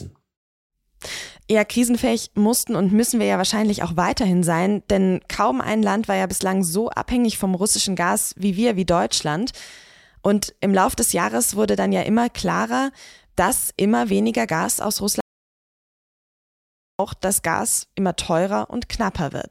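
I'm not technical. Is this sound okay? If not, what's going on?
No. From 15.21 to 16.99 seconds there's an audio dropout to silence: the speech cuts off for about 1.8 seconds. Unlike a natural pause, even the faint background hiss disappears. The input was likely lost briefly, so that stretch is gone.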